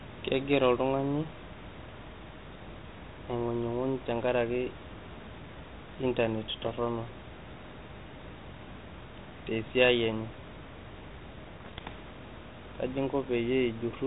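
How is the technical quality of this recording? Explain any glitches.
The recording is a speech clip carried over an ADPCM link, and it has two glitches. Room noise sits about 16 dB below the speech. The light G.726 coding points to a 32 kbit/s link, as on a cordless phone.

Bit errors on an ADPCM link occur at 6.62 to 6.72 s and 11.57 to 11.93 s, the second being longer. Flipped bits corrupt the decoder's step size and prediction, so each error rings on briefly. You hear pops, rough bursts and short level jumps.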